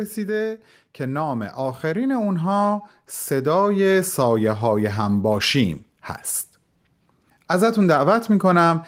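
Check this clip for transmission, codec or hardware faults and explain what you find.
One fault stands out, an automatic gain rising. From 0.97 s to 5.55 s the automatic gain control, judging the input too quiet, steadily adds about 9 dB of gain. The speech and the background noise swell together, which separates it from a speaker moving closer or talking louder.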